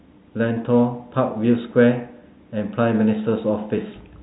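No technical faults occur anywhere in this speech. The G.711 telephone coding can be heard as a band limit, with nothing above about 3.9 kHz, and any quantisation hiss is at most faint.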